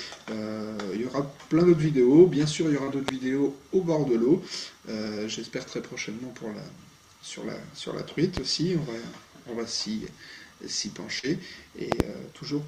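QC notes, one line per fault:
2.83–2.90 s and 11.19–11.26 s, short concealed packet loss: about 40 ms of data arrived too late to decode each time. The receiver bridged the gap by extending the preceding sound and then crossfading back, so each spot is heard as a brief smear or wobble.
3.08–3.11 s, 8.37–8.40 s and 11.92–12.03 s, loud pop: a sudden voltage step or pulse, likely from a plug, switch, static or driver glitch, entered the signal. The result is a sharp pop roughly 15 to 20 dB above the surrounding sound, doubled at 11.92 s, with the sound continuing underneath.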